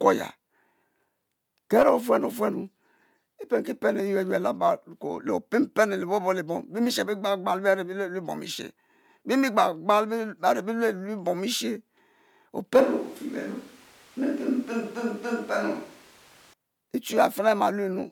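From 12.81 to 16.53 s the speech turns abruptly hollow and thin, likely a switch to a distant microphone. The spectrogram shows weaker bass, smeared reverb tails and room noise about 25 dB down.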